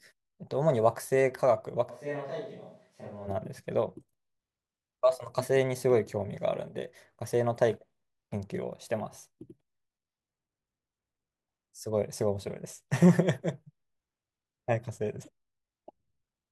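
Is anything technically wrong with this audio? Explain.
Yes. From 1.91 to 3.26 s the speech suddenly turns roomy and hollow, thinner in the bass and about 10 dB quieter, with room noise sitting roughly 35 dB below the speech. It then snaps back just as abruptly. This is likely a switch to a distant microphone: the close microphone's feed dropped out, and a mic further from the talker covered the gap, picking up more of the room's reflections and ambience and less of the direct voice.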